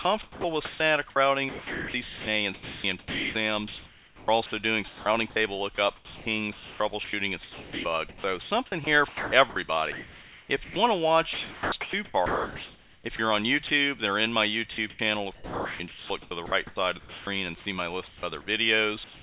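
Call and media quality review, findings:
Sound chopped by the voice detector. Four stretches: 0.02–5.36 s, 5.96–10.76 s, 11.33–13.7 s, 14.72–17.27 s. Likely sender VAD toggling. Quiet parts swapped for comfort noise, about 2.7 s, 2.3 s, 1.4 s and 1.3 s per stretch. Choppy.

Sound dropped by the voice detector. 18.08–18.23 s. Likely VAD judging quiet sound as background and halting transmission. Roughly 60 ms of real sound lost. A 150 ms patch of steady noise fills the gap before sound resumes.

Comfort noise in place of the background. 19.04 s to end, about 190 ms. Likely DTX pause with receiver-generated noise. Background sits about 24 dB below loud parts, now about 2 dB quieter. Featureless hiss replaces real ambience. Band limit at 4 kHz fits G.711 mu-law.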